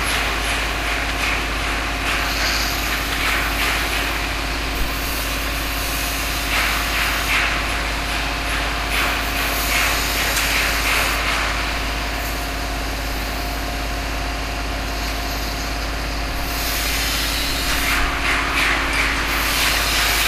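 Nothing stood out as a technical fault on listening to these sounds.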